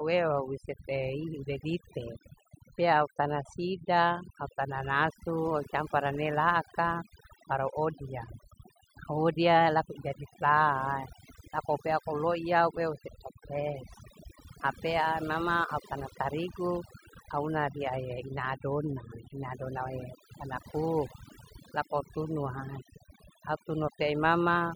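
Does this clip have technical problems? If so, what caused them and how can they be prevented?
Yes. Throughout the speech, the gaps between phrases drop to near silence scattered with twinkling specks. This is overdone noise removal: a noise reduction stage was pushed so hard that any frequency band sitting close to its noise estimate was pulled far down or cut outright. Isolated bands flickering on and off make the specks, and the quieter parts of the voice were stripped along with the noise. To prevent it, use a gentler reduction amount with a lower noise floor setting, and reduce noise at the source by recording in a quieter space or closer to the microphone.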